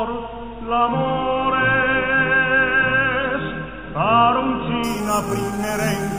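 Imaging from sample-and-hold upsampling, 4.84 s to 6.18 s: unsmoothed sample repetition, which fits an 8 kHz source, mirrors the spectrum into 4 to 8 kHz at about -15 dB, giving a metallic fizz.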